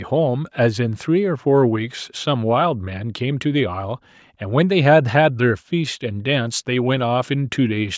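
No technical faults can be heard in the speech. The call microphone processing is audible as a trimmed low bass and an upper limit around 8 kHz, which is ordinary for that path.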